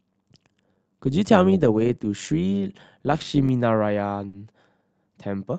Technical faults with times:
0.00-3.49 overlap-add ripple
4.27-4.36 burst of packet loss

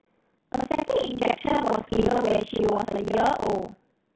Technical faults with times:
0.00-4.15 buffer tearing
1.74-2.04 bit errors on an ADPCM link

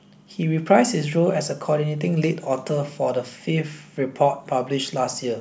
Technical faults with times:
none

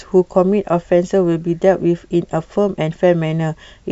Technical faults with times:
none

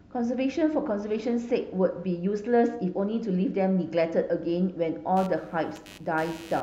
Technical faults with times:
5.16-6.62 computer activity noise

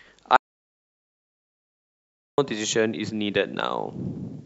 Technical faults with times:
0.36-2.38 audio dropout to silence

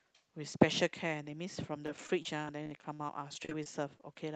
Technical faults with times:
1.86-4.16 repeated packet loss (robotic sound)

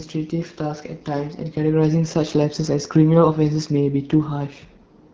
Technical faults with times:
0.00-5.13 AMR wideband (HD Voice) codec

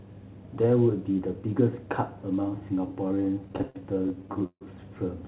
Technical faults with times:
3.08-4.63 repeated stalls (stutter)

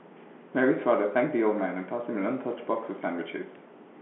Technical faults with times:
none

